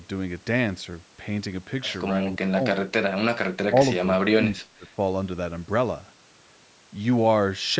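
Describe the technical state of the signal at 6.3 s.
At 6.3 s the speech is intact, with no dropout, distortion or other fault, only the ordinary call microphone processing, which trims the lowest bass and leaves nothing above 8 kHz.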